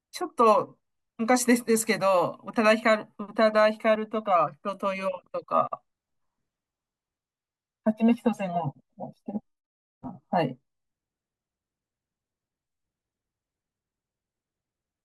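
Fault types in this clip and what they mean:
Compressed frames skipped: the decoder never played a block of the encoded stream, either because it was missing from the file or because it was rejected as corrupt. At 3.95 s the speech jumps forward by around 30 ms, which fits a single lost frame of 32 ms. At the join, a sliver of speech simply vanishes.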